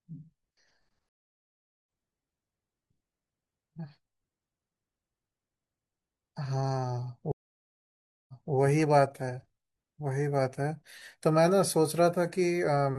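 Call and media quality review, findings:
Stream reconnect, 1.09–1.86 s: about 0.77 s dropout, then speech resumes roughly half a second later. Player lost connection and restarted its decoder mid-stream. Waveform shows a flat gap followed by a jump cut. The spectrogram shows a blank column with a hard edge.

Stream reconnect, 7.32–8.54 s: about 0.97 s silence, then audio resumes 256 ms earlier, so a short stretch of speech repeats. The server likely resent a buffered burst on reconnect. The waveform shows a flat gap and then a duplicated segment.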